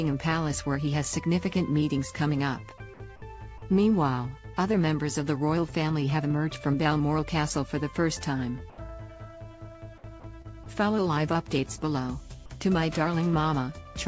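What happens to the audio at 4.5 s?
At 4.5 s the audio plays through cleanly, with no dropout, glitch or distortion, only the usual band limit of a call path that carries nothing above 8 kHz.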